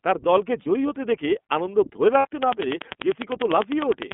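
Throughout, the speech sounds thin, boxed-in and faintly rough and synthetic, with nothing above about 3.4 kHz and little below 200 Hz. This is the iLBC codec at work: a narrowband VoIP coder that encodes each 30 ms frame's excitation on its own. The damage is plainly audible, and the character fits iLBC's 13.33 kbps mode.

At 0.63 s a brief held, slightly buzzy vowel replaces the speech for about 30 ms. At 2.19 s a longer one lasts about 60 ms. These are lost iLBC frames, consistent with one and then two missing 30 ms frames. The decoder fills each gap by repeating the last pitch cycle mixed with noise. Because each frame stands alone, the voice is right again almost at once after both gaps.

From 2.43 s to 4.13 s a train of clicks ticks over the speech and through its pauses: about twenty near-identical pops at a steady 10.1 per second, peaking around 20 dB above the speech. Pulses this regular and uniform point to a repeating electrical disturbance, likely interference from nearby equipment or a faulty connection or power supply.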